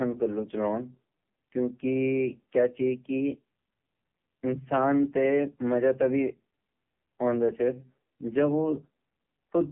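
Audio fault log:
throughout AMR narrowband mobile codec. Speech is confined to roughly 150 Hz to 3.4 kHz. Sparse pulse coding sounds heavily buzzy, which fits a rate near 6 kbps.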